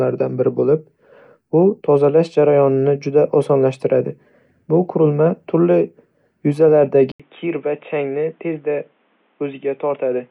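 At 7.12 s the speech stops for about 80 ms, and from there to the end it sounds dull and boxy: nothing above 3.8 kHz remains, the level drops by roughly 5 dB, and a new background noise floor appears, roughly 40 dB under the speech. The likely cause is the input switched to a poorer device, such as another microphone or a headset call profile, with its own narrower band, tone and noise.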